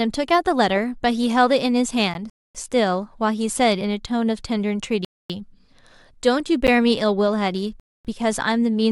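At 2.14 s a gap between stream segments cuts a 13 ms hard-edged hole into the speech, repeating at 6.67 s as a 10 ms hole. Mismatched segment timestamps leave silence at joins that fall about 4 s apart. These holes are brief ticks rather than pauses. From 2.30 to 2.55 s, a gap between chunks inserts a much longer 250 ms silence, recurring at 5.05 to 5.30 s and 7.80 to 8.05 s. Each 2.5 s chunk leaves silence at its join, so the speech stalls audibly on a tighter rhythm.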